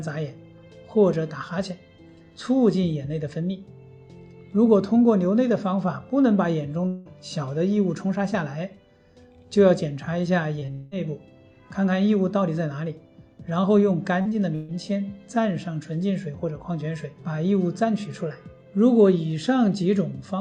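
The audio, about 20 s long, has four short concealed packet losses, where roughly 20 to 40 ms failed to reach the decoder in time and were patched by extending the preceding sound. They fall at 10.59 s, 10.65 s, 14.21 to 14.27 s and 14.29 s, each heard as a brief smear or wobble before the real signal blends back. Two gaps of about 180 ms at 6.87 to 7.07 s and 200 ms at 10.72 to 10.93 s point to a likely long network dropout. Concealment bridges each gap with a continued, fading buzz or hiss rather than silence, and the sound resumes later, missing whatever fell inside. A burst of packet loss at 14.55 to 14.70 s drops about 140 ms of consecutive audio. The receiver sustains the last sound and turns it down across the gap, so it comes out as a held buzz or fading hiss before the audio resumes further on.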